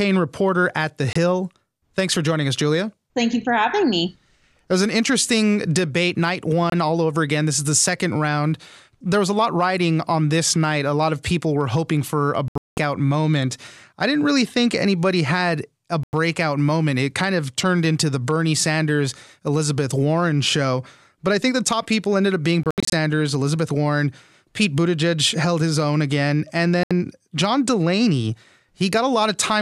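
Digital broadcast dropouts mute the speech at 1.13 s and 6.70 s (one 24 ms frame each), 12.48–12.78 s (several holes), 16.03–16.14 s, 22.63–22.93 s (scattered) and 26.83–26.91 s, where corrupted frames were silenced and lost.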